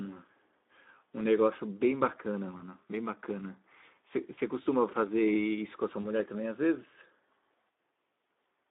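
From the start the speech carries Speex codec damage. The band sits between roughly 250 Hz and 3.7 kHz, a narrowband telephone line with nothing above. Within that band the CELP coder has too few bits to model the excitation cleanly, so the voice sounds hoarse and grainy, with a noisy edge on voiced sounds. The degradation is plainly audible and fits a low setting near 11 kbps.

At 2.57 s, 4.35 s and 6.01 s there are brief breaks from VoIP packet loss concealed by the speech codec. Each loss amounts to about one 20 ms frame. In place of the missing audio the decoder repeats its last pitch and filter with falling gain, producing a short buzzy or noisy, smeared patch. Because each following frame is built on that guess, the disturbance stays audible for about 30 to 50 ms before the speech settles.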